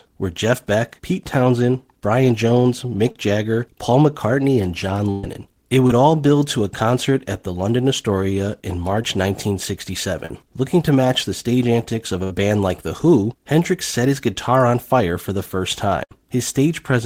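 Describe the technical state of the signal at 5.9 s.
At 5.87 to 5.90 s there is a short concealed packet loss. About 20 ms of the speech stream arrived too late for the decoder, and the receiver covered the gap by synthesising roughly 23 ms of continuation, extending the preceding sound from its pitch or as shaped noise, then crossfading back into the received signal. It sounds like a brief smear or wobble, and any short consonant falling in that window can disappear.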